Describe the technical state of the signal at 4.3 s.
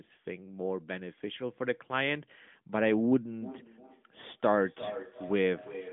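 At 4.3 s the signal is inside a feedback echo between two devices, running from 3.41 s to the end of the clip. A second device replays this audio and the microphone recaptures it, beyond its echo canceller's reach. Each phrase returns about every 0.4 s, thinner and ringing, peaking about 12 dB below the direct speech. A spectrogram shows fainter copies of each speech pattern repeated at that spacing, all cut off near 3.7 kHz by the narrowband mobile line.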